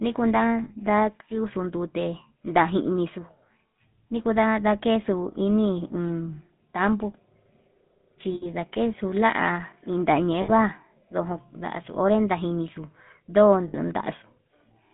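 Right from the start the whole clip has that GSM full-rate codec sound: a buzzy, gravelly roughness laid over the speech, and it's plainly audible. The codec models the vocal tract and drives it with a sparse, regularly spaced pulse excitation, so the fine texture of the voice gets replaced by something coarse and grainy. The band only runs from about 150 Hz to 3.6 kHz, with nothing up top, and the overall character fits the old 13 kbps full-rate coder.

On top of that there are four spots with lost GSM frames: 0.64 to 0.71 s, 8.34 to 8.48 s, 10.42 to 10.51 s and 13.68 to 13.76 s. Those are gaps of about 60 ms, except the one at 8.34 s, which is closer to 80 ms. In each one the decoder had no good data, so it kept reusing the last good frame's settings. You hear the sound freeze into a short, rough, metallic ring instead of dropping out cleanly.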